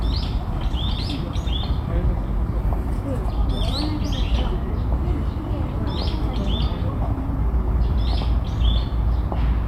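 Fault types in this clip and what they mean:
No technical faults can be heard anywhere in this recording of sounds. Nothing in it calls for a fault entry.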